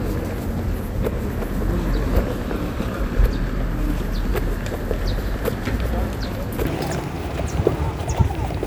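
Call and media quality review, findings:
Wrong sample rate, 6.67 s to end of clip (8.66 s). Sound runs 1.5 times fast and about 7 semitones high, speed and pitch shifted together. Ratio fits 32 kHz material played out at 48 kHz with no resampling; probable component the playback or mixing stage. Spectrogram: all harmonics and formant bands jump up by a factor of 1.5 at 6.67 s. Waveform: events compressed in time, envelopes shorter and tighter.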